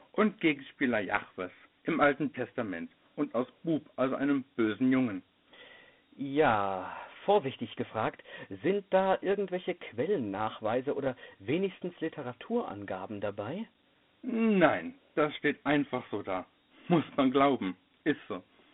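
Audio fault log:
Throughout, Dialogic VOX ADPCM: the speech sits in a narrow telephone band from about 150 Hz to 3.5 kHz, with nothing above 3.8 kHz, and a plainly audible gritty hiss rides on every syllable. Each sample is coded as a 4-bit step from a prediction, with a step size that adapts to the signal. The coarse steps leave quantisation noise that rises and falls with the speech. The sound fits a 32 kbps stream at 8,000 samples a second.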